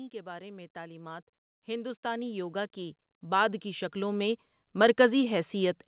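Automatic gain rising runs from 0.1 s to 5.33 s: the gain control judged the input too quiet and kept raising its gain, about 19 dB in all, so the speech and background noise swell together, heard through a call path that cuts everything above 4 kHz.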